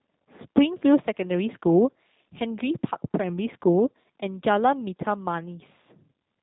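Throughout the speech, the sound is plainly muffled, slightly rough and synthetic. This points to the G.729 codec, which fits an 8 kbit/s link: each 10 ms frame is rebuilt from a vocal tract model, pitch prediction and sparse pulses, with nothing kept above 4 kHz.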